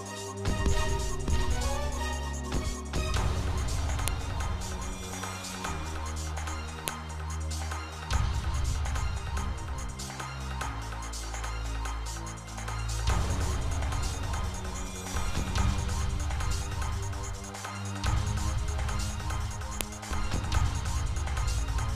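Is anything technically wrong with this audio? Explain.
Yes. Sharp, loud clicks at 4.08, 6.88 and 19.81 s are file headers played as audio: joined WAV pieces kept their header bytes, which play as samples. Each shows as a single tall waveform spike and a thin full-height vertical line on a spectrogram.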